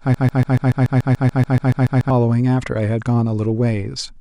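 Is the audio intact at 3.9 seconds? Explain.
Yes, at 3.9 seconds the audio is intact, with no dropout, click, distortion or other fault at that moment.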